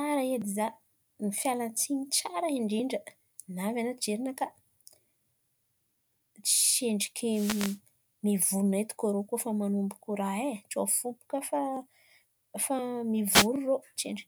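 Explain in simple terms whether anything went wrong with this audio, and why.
The radio link from a wireless microphone briefly faded twice, letting receiver noise through. Each wireless microphone noise hit sounds like a quick swish of static over the speech, from 7.30 to 7.79 seconds and again from 13.29 to 13.48 seconds.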